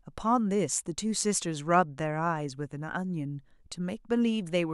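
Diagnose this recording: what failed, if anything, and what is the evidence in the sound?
Nothing failed; no fault can be heard anywhere.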